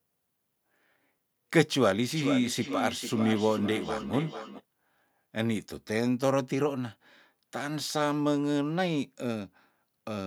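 From 2.15 s to 4.65 s the speech comes back on itself roughly every 0.4 s, each return sounding thinner and more ringing than the original, peaking about 7 dB below the direct speech. This is feedback echo between two devices: two devices in the same room are joined to one call, and one plays out what the other's microphone captured. That microphone hears it again, and neither device's echo canceller removes sound played by the other.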